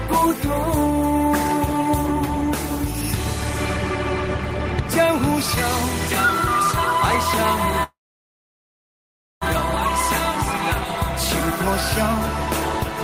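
At 7.83 s the audio stalls: the last sound hangs on briefly, then fades to near-silence for roughly one and a half seconds before resuming at 9.44 s from exactly where it stopped. This call audio freeze likely came from packets held up in transit, emptying the jitter buffer, so about 1.6 s of delay was inserted while nothing was lost. At 10.07 s a single sharp click cuts through, a thin vertical line in the spectrum. These dropped samples, a tiny fraction of a millisecond, likely make the waveform jump straight from one value to a later one, too brief to remove any audible sound.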